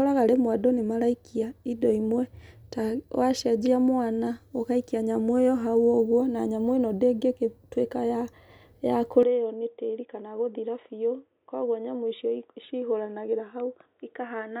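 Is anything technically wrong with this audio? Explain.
Yes. Input switched to a poorer device at 9.23 s, likely a narrower-band microphone. From there the speech turns dull, loses everything above 3.8 kHz, and drops about 5 dB.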